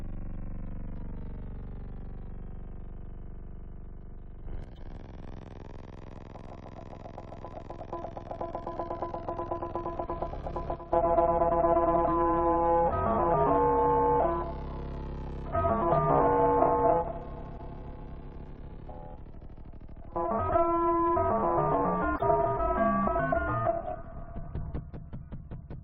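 A sudden gain jump at 4.46 s lifts the level by about 6 dB until 4.64 s, with the sound and its background rising together in a single step. The likely cause is a digital gain change applied between adjacent samples without a ramp. A corrupt frame decoded at 4.75 to 4.79 s follows, where damaged bits in a couple of compressed frames were played anyway. Misread gains and codes put energy at the wrong frequencies, giving a brief glitch.

Another corrupt frame decoded, a single frame, gives a short glitch at 10.06 to 10.09 s. A sudden gain jump at 10.76 s then drops everything by about 10 dB until 10.93 s. Corrupt frames decoded recur at 17.53 to 17.60 s and 22.15 to 22.23 s, each spanning a few frames. The later burst is noticeably louder, near about -15 dBFS.

A final sudden gain jump at 24.8 s cuts the level by about 6 dB through to the end.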